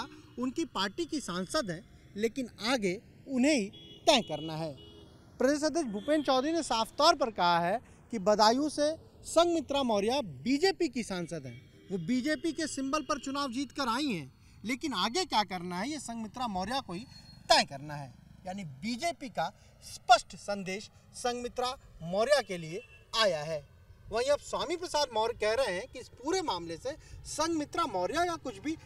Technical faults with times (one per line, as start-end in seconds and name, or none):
0.00-28.86 channels drifting apart